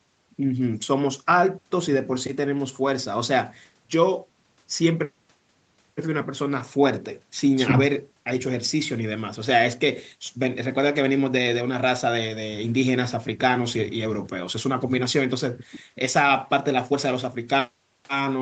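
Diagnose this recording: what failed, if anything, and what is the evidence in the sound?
Nothing's failed here; the speech runs through an ordinary call chain, and the way its top end stops at about 8 kHz just fits the bandwidth of a wideband call codec rather than pointing to any fault.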